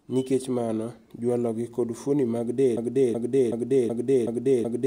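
At 2.77 s, after "gi kod fuoni mag", a broken-record loop takes over. One 375 ms fragment repeats six times, back to back, until the end, and the speech that should follow is lost. Unlike an echo, each repeat is identical and undecayed, likely from a stalled stream.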